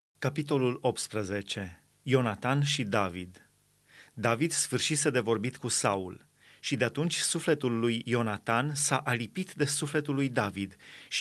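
No technical faults can be heard in this speech.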